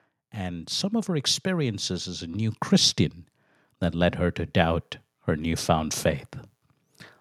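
Automatic gain rising, from 0.17 to 3.05 s and again from 3.91 to 6.03 s. The gain control judged the incoming level too low and pushed its gain up step by step, by about 8 dB in the first stretch and about 6 dB in the second. Because the whole signal is scaled, the speech and the room noise behind it swell together, a slow climb in loudness over roughly three and then two seconds.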